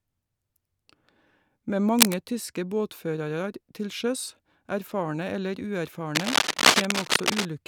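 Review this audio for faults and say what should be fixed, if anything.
Cable scratch noise appears at 1.99–2.16 s, just before "tyske båtførarar til sjøs", and at 6.15–7.47 s, after "erfarne eller". Both are dense, irregular rustling bursts above the speech, likely from a worn cable or connector being moved. Unlike clipping crackle, they don't follow speech peaks. Replace or reseat the cable and keep it still while recording.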